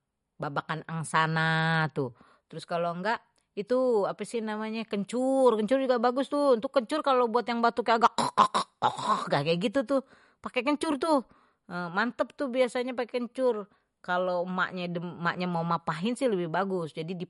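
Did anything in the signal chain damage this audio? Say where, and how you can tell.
Yes, at the codec: the speech sounds watery throughout and stops at 11.2 kHz, fitting roughly 48 kbps, likely MP3 compression starving frequency lines.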